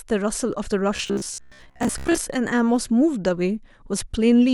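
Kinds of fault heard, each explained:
Robotic sound from repeated short buffers: from 0.96 to 2.18 s the speech becomes a rigid, metallic buzz fixed at 66.8 Hz that loosely follows the syllables. This is likely from late-arriving audio, with a segment of about 15 ms looped for most of that stretch.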